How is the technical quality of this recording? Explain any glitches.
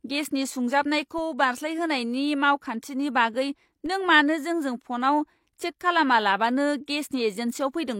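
Two abrupt glitches stand out, both of the same kind: DC steps at 1.18 s and 3.86 s. At each point the waveform's zero line jumps suddenly to a new offset, as happens when a converter recalibrates or an input carrying an offset is switched in. The shifted baseline then decays away, consistent with a 20 Hz high-pass in the chain pulling it back toward zero. Each step is heard as a low thump or click, while the speech itself continues unaffected.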